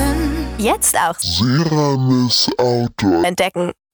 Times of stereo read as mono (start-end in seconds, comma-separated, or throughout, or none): 1.22-3.24